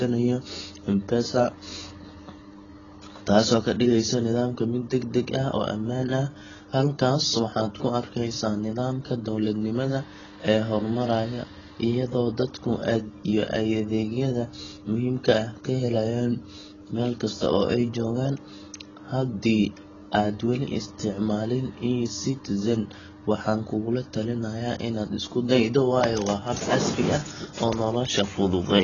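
Throughout the speech, nothing sounds above 7.1 kHz and the sound is dull and smeared, with heavy codec damage. This is likely AAC compression at a low bitrate, around 16 kbps. A spectrogram shows a hard ceiling at 7.1 kHz.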